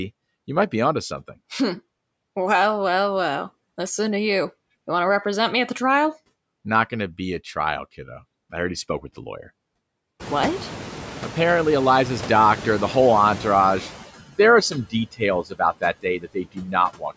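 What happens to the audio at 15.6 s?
Right around 15.6 s you're at the tail of a spot where the noise suppressor cut speech. From 15.43 to 15.6 s it mistook part of the speech for background and pulled it down by up to about 17 dB, so that bit sounds swallowed and faint rather than cleanly spoken. The same processing also leaves noise suppressor artifacts running throughout. It's knocking the steady background down by about 20 dB, frame by frame. With the room noise having risen from around 10 s, the leftover noise sinks between phrases and comes back up underneath them.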